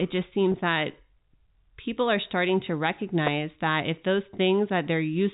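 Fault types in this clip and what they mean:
Packet loss with pitch repetition: at 0.52 s, 20 ms of speech drops out and is bridged by a repeated pitch period, heard as a brief held buzz.
Electrical switching spike: a sharp snap sits on top of the speech at 3.27 s, likely an arc from a nearby switch or motor coupling into the line.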